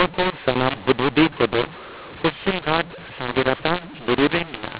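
A mu-law and A-law mix-up runs through the whole of this speech clip: the telephone audio was encoded with the A-law version of G.711 but decoded as if it were mu-law, so every 8-bit code is mapped onto the wrong logarithmic curve. Levels come out scrambled, some too loud and others too quiet, giving harsh, distorted speech, and the quietest samples are pushed well above silence, so pauses fill with noise. The band still stops at 4 kHz, as expected of 8 kHz telephone coding.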